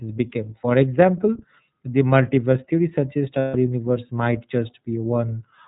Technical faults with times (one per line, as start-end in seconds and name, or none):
0.00-5.67 iLBC codec
3.39-3.55 lost iLBC frames